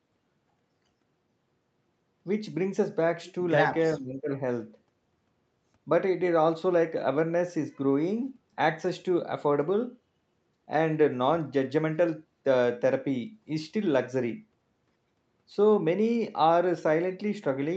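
At 3.96 s the speech suddenly sinks, and it stays pushed down until about 4.31 s, dipping by something like 20 dB at its lowest before recovering. That's the classic sound of speech suppressed in double talk: the likely cause is the far end talking at the same moment, so the echo canceller couldn't tell this talker apart from loudspeaker echo and clamped down on both. The top of the audio sits at 8 kHz throughout, as you'd expect from the call codec.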